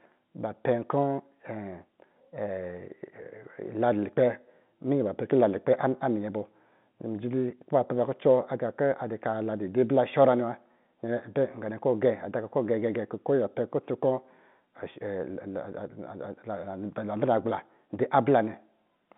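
Nothing goes wrong anywhere in this speech, which simply carries the narrow telephone sound of G.711 coding, with the band running from about 150 Hz up to roughly 3.6 kHz as you'd expect from an ordinary phone line.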